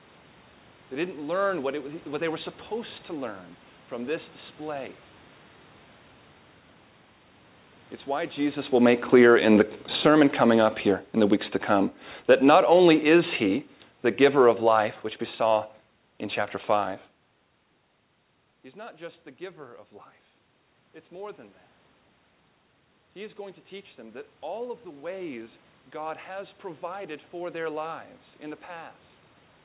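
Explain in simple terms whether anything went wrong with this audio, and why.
From about 8.7 s to 17.05 s the speech sinks steadily, and the background noise sinks with it, as if someone were slowly turning down a volume knob. That is automatic gain falling. The call's automatic volume control decided the input was too loud or too noisy and kept lowering its gain over those eight seconds. The speaker shifting position around 8.5 s and 17.5 s is ordinary movement, not part of this fault.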